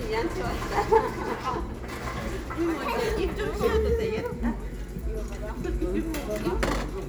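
No technical faults can be heard anywhere in this recording of sounds; the signal stays intact and steady throughout.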